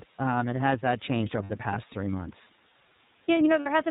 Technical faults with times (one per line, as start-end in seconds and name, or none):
0.00-3.91 low bit depth with dither
0.00-3.91 iLBC codec
1.44-1.50 lost iLBC frames
3.60-3.67 lost iLBC frames